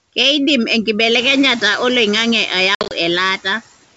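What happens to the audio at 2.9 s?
Packet loss on the ADPCM call runs from 2.75 to 2.93 s. About 110 ms of audio is missing, scattered over 160 ms, with the longest gap near 60 ms, which fits roughly ten lost packets. The gaps are filled with silence, so the speech drops out with hard edges. Because the decoder's predictor and step size have lost track of the sender's, the speech comes back at about 2.9 s with brief slight distortion before it settles.

Noise suppressor artifacts are also present at this point, as they are throughout. The suppressor cuts the bands it judges to be steady noise by about 17 dB, frame by frame. The background sinks in the pauses and rises again under the speech.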